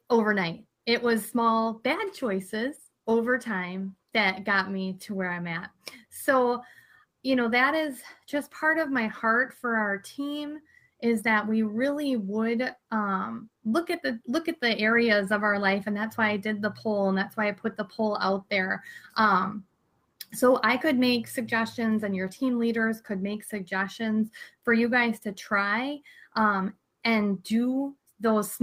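Nothing stood out as a technical fault on listening.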